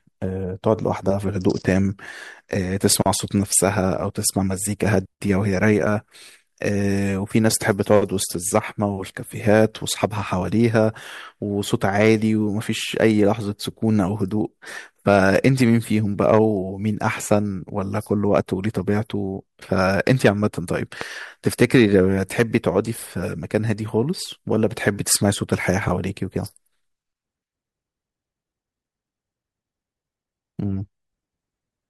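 At 21.01 to 21.03 s a single loud pop jumps well above the speech, which carries on unbroken beneath it, unlike a dropout. It is likely an electrical transient.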